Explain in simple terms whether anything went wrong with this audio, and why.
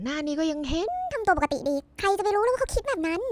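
Something did go wrong, starting at 0.88 s and running to the end. From there the speech suddenly sounds squeaky and rushed. That's a wrong sample rate problem: the audio is being played back faster than it was recorded, with nothing adjusting for the difference. It runs about 1.45 times too fast and sits roughly six and a half semitones higher, which fits sound recorded at 22 kHz being played as if it were 32 kHz.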